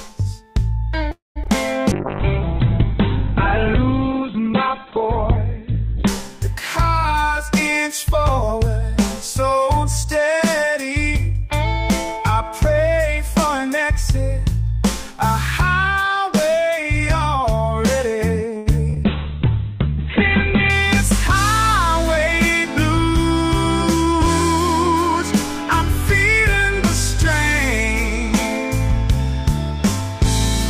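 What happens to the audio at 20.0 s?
A call bitrate drop runs from 19.05 to 20.78 s: the encoder is starved of bits, so the top end collapses from 20 kHz to 4 kHz and the sound turns muffled and watery, fitting a fall to roughly 8 kbps. Unlike packet loss, nothing drops out.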